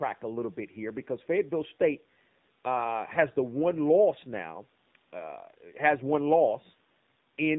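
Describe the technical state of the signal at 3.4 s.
AMR narrowband mobile codec damage is present at 3.4 s, as it is across the whole clip. The speech has been coded at 7.4 kbps. The codec samples at 8 kHz, so nothing above 4 kHz survives. It rebuilds each 20 ms frame from a vocal-tract model excited by a few pulses in every 5 ms subframe. At this low rate the damage is plainly audible: the speech sounds muffled, buzzy and synthetic.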